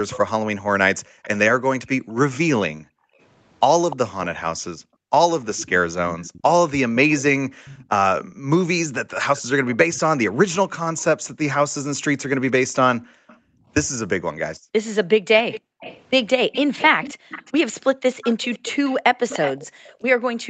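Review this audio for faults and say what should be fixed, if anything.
A delayed copy of the talker trails the speech by about 0.3 s. It appears at 0.1–2.37, 3.9–7.85, 9.36–13.36 and 15.5–20.5 s. It sits about 15 dB below the speech, and about 25 dB below in the third stretch. This is likely an echo leak from a far-end loudspeaker that the canceller failed to remove. Headphones or better echo cancellation at that end would prevent it.

Background gated by the echo canceller: room sound drops by up to about 40 dB at 0.98–3.19, 4.75–5.11, 7.49–8.48 and 13.0–20.48 s. The canceller clamps the microphone hard while the loudspeaker plays. Gentler suppression settings would prevent it.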